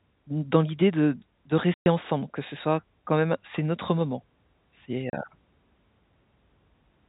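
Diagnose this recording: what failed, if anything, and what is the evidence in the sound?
Packet loss filled with silence at 1.74–1.86 s and 5.10–5.13 s: network stage. The speech drops into dead silence for 120 ms, then 30 ms, with hard edges. Both gaps are multiples of 30 ms, which points to four lost packets and then one.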